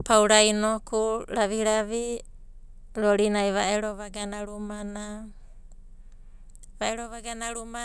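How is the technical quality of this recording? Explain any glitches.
No technical faults are audible.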